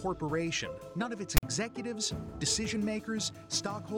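At 1.37 s a harsh, loud rasp cuts in with hard edges, biased to one side, then drops to dead silence until 1.43 s. This is file tags played as audio: a text tag block and its zero padding were decoded as samples.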